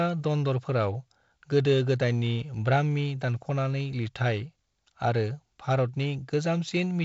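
Nothing in this speech recording registers as a technical fault.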